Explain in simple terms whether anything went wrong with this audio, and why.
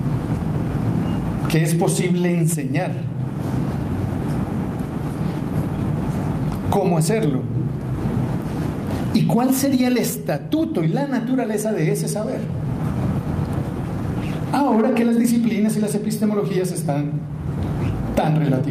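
There is clock drift between sender and receiver. The sending device's clock runs roughly 4 percent faster than the receiving one, so audio arrives a little quicker than it can be played out. The waiting buffer keeps overfilling throughout the clip.

To cope, the receiver makes repeated timing corrections, trimming short slivers of sound. This happens from 0.33 to 3.01 s, running about 104 percent speed, and again from 5.77 to 18.62 s at about 103 percent, heard, if at all, as small hiccups and a slightly hurried, uneven pace.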